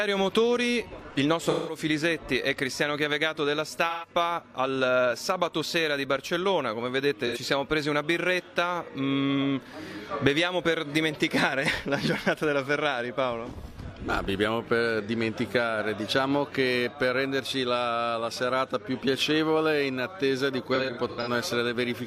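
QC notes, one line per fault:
1.50–1.78 s, 3.89–4.08 s, 7.26–7.38 s, 20.75–21.29 s: AAC frame loss with concealment. Missing frames are rebuilt from the last good spectrum, giving smeared, noisy, phasey patches. First three drop about 171, 128 and 85 ms, fitting whole 42.7 ms frames. The last is scattered gaps, longest around 100 ms.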